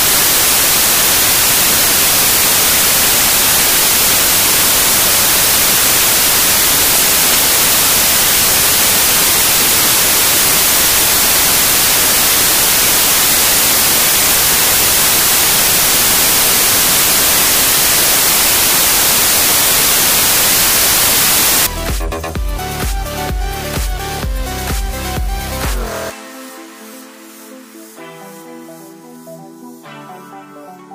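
From 0.0 s to 21.67 s the audio suffers from samples built from the wrong bytes. The reader is assembling each sample from mismatched bytes, whether offset by one, in swapped order or on the wrong alignment, so the rapidly varying low-order bits land in the most significant position. The result is loud, harsh broadband noise across that whole span. After 21.67 s the fault is absent.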